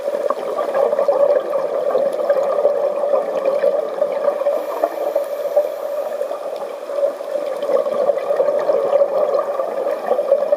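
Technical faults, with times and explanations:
No technical faults can be heard in the audio.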